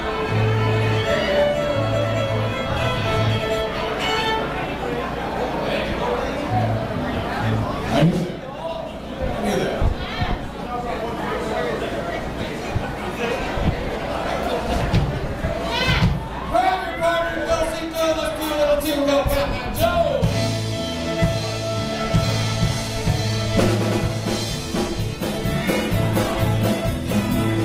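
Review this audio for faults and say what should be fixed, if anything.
Adaptive stream at a lower bitrate from 25.15 s to the end: the quality abruptly drops, with codec artefacts rising and no gap. This fits a slowed connection pushing the player down to a lower-bitrate rendition, roughly from 64 to 16 kbit/s Opus. To prevent it, buffer further ahead or set a higher minimum bitrate floor.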